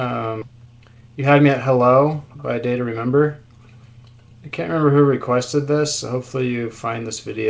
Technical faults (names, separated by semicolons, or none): skip ahead; jitter buffer speed-up